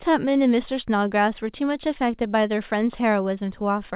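No faults are present in this speech; it has passed through a call path whose band stops at 4 kHz, which fits G.711 mu-law at 64 kbps.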